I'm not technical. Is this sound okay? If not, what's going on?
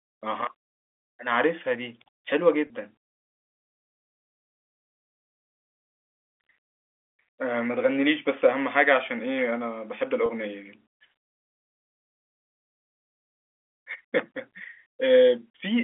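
No. Twice, at 2.67 s and 10.26 s, the speech briefly catches on a held, buzzy tone for about 30 ms. This is packet loss with pitch repetition: a piece of audio went missing in transit, which fits a single lost packet, and the receiver filled the gap by repeating the last sliver of voice.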